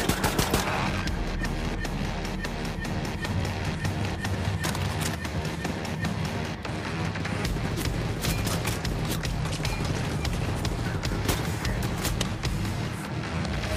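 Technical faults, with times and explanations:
No technical faults are audible anywhere in the clip. Nothing in the sound calls for a time or an explanation.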